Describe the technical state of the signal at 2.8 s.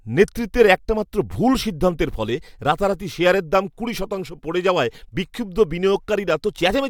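At 2.8 s the speech signal is intact, with no dropout, distortion or other technical fault.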